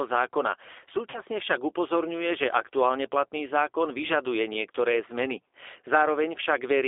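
From the first moment to the last, the speech carries the sound of the G.729 codec at 8 kbit/s, squeezed into a line band of roughly 300 Hz to 3.6 kHz. The codec rebuilds each short frame from a filter shape, a pitch guess and a handful of pulses, so the voice comes out intelligible but thin, a little rough and faintly synthetic, with nothing bright above the top of that band. The damage is plainly audible.

Around 1.10 s to 1.20 s there's a hiccup from VoIP packet loss concealed by the speech codec. About 40 ms of audio went missing, which fits two 20 ms packets dropping out. The decoder covers the gap by stretching its last pitch and filter forward and turning the level down, so you get a brief stretched, fading stretch of buzz or coloured noise. Because each frame leans on the one before, the voice stays weak or distorted as it comes back into "však upozorňuje že aktuálne".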